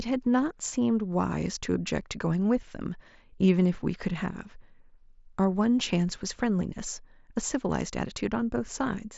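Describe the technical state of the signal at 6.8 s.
At 6.8 s the speech is intact, with no fault at that moment, only the Bluetooth mSBC headset codec's band limit, leaving nothing above about 7.7 kHz.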